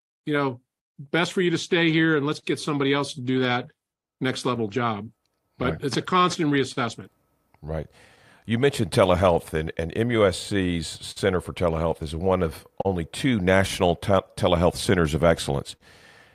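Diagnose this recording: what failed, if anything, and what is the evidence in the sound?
Throughout the speech the pacing feels faintly uneven. This is clock drift between sender and receiver at the network buffer stage. The sender's clock runs roughly 4 percent slow, so the receiver's jitter buffer keeps draining and has to be topped up continually.

From 0.76 s, just after "you know", until 15.53 s, the tempo drags slightly, at 98 percent speed, with small hiccups at uneven intervals. These are repeated timing corrections in the buffer: the receiver repeats short slivers of audio, adding around 300 ms in all, to avoid running dry.

Between 1.06 s, also just after "you know", and 15.82 s, around fifteen brief ticks and smears appear, none longer than about 50 ms. These scattered short gaps come from lost or late packets on the network. Concealment extended the preceding sound to bridge each one, roughly 300 ms in total.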